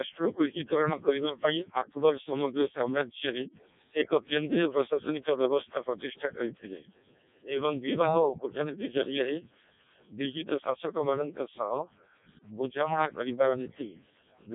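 Speech heard through the Codec 2 vocoder for the whole clip, with heavy damage: robotic and buzzy, rebuilt from sine waves using only pitch, voicing, energy and a spectral envelope, and nothing above 3.8 kHz, which fits its lowest 0.7 kbit/s mode. A spectrogram shows neat synthetic harmonic stripes over an empty band above 3.8 kHz.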